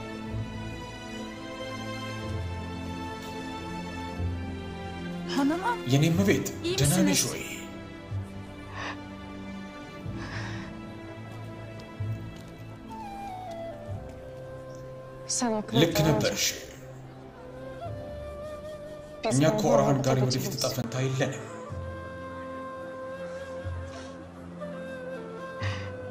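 At 20.82 s the input likely switched to a poorer device, so from there to the end nothing reaches above 12.5 kHz. After a 20 ms gap at the switch, the sound turns duller, with a faint new background noise floor and roughly unchanged level.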